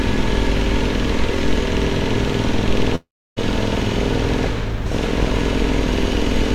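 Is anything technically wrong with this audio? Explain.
Yes. From 2.95 to 3.39 s the sound turns into a fading buzz, then near silence for about 0.3 s, and resumes with about 0.42 s missing. This is likely a long network dropout, with the receiver stretching the last audio across the gap.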